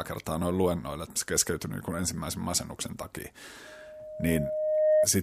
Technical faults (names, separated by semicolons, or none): loudspeaker feedback squeal